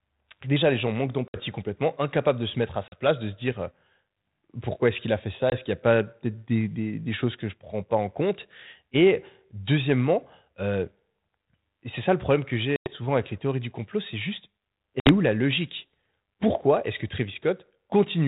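Packet loss on an ADPCM call cuts out 60, 40, 20, 100 and 60 ms at 1.28 s (after "déjà les gens manquent"), 2.88 s (after "de se mettre à"), 5.5 s, 12.76 s (after "ça le problème que") and 15.0 s. Each gap appears as a hard-edged blank column on a spectrogram and a flat line in the waveform. The G.726 decoder's predictor and step size then no longer match the sender's, so the sound resumes slightly distorted and settles within tens of milliseconds.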